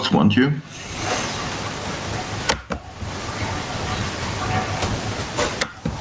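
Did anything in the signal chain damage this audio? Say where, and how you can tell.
Yes. Gain pumping runs through the whole clip: the level is pulled down on every loud sound, a swing of roughly 25 dB, so loud and quiet passages sit unnaturally close in level and the sound is squashed. The likely cause is microphone gain set far too high, with a fast limiter or compressor clamping every loud sound. On a waveform the envelope looks flattened.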